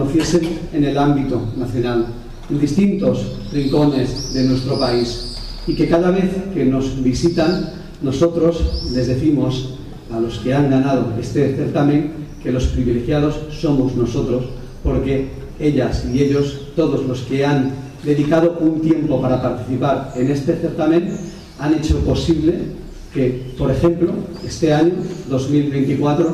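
No technical faults can be heard anywhere in this recording.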